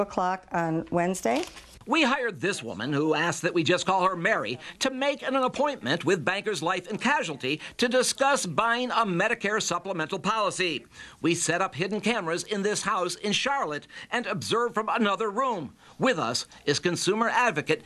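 Nothing goes wrong anywhere in this audio, so there's no fault to point to at any moment.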